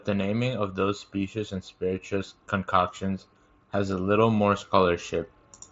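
Nothing faulty here: the speech comes over a Bluetooth mSBC headset link, with the band topping out around 7.7 kHz.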